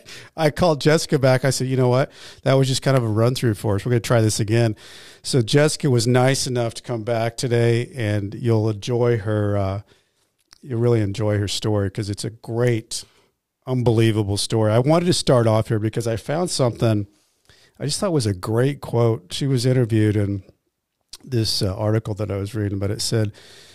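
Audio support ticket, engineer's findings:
Electrical switching spike: two sharp snaps riding on the speech, at 2.97 s and 12.67 s, each near-instantaneous, peaking roughly -10 and -15 dBFS. Likely a nearby switch, relay or motor arcing, with the burst coupled into the audio line.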